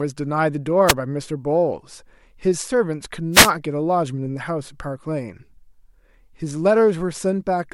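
Two wireless microphone noise hits break through the speech, a brief swish of static at 0.87 to 0.93 s and a longer burst from 3.32 to 3.51 s, as the FM radio link fades and receiver hiss surges up.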